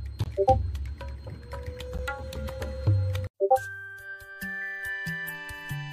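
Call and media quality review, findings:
Gap between stream segments at 1.98 s: brief hard-edged silence, about 11 ms. Segment timestamps leave a hole the player fills with silence. No audio lost; fits 4-second segmenting.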